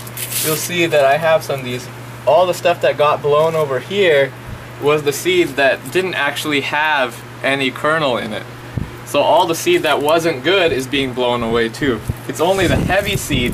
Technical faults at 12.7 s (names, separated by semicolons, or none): CD scratch ticks